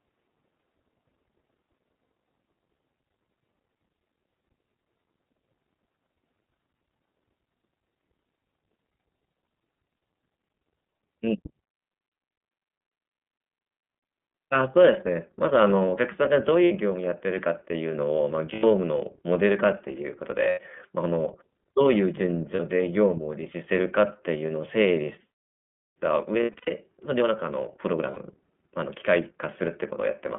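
Speech that sounds band-limited to about 200 Hz to 3.4 kHz, slightly rough and synthetic, with plainly audible damage throughout from the iLBC codec, a narrowband VoIP coder at 13.33 kbps that fits 30 ms frames. Short held, buzzy vowel-like patches replace the speech at 16.64–16.72, 18.53–18.64, 20.49–20.59, 22.55–22.59, 26.43–26.70 (scattered, longest run about a tenth of a second) and 28.11–28.18 s. These are lost iLBC frames: the decoder repeats the last pitch cycle with noise, then the speech recovers almost immediately.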